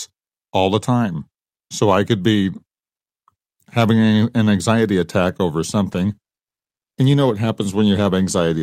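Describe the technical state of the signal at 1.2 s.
At 1.2 s the speech signal is intact, with no audible fault at that moment.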